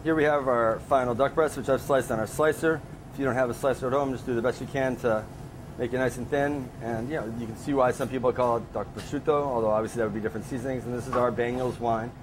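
No technical fault can be heard anywhere in the clip. The audio holds steady throughout, with nothing to suggest a problem in how it was captured or delivered.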